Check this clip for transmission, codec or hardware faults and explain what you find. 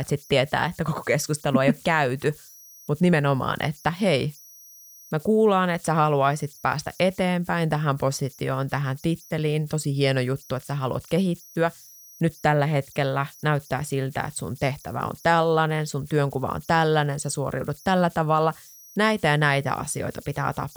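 One hardware fault runs through the whole clip. A faint whistle around 5 kHz sits in the pauses with grainy noise under quiet speech, at about 29 dB below the signal. These are converter idle tones: an undithered delta-sigma converter locks into repeating bit patterns at low input levels.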